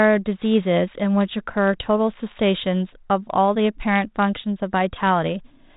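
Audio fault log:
No faults found in this speech recording.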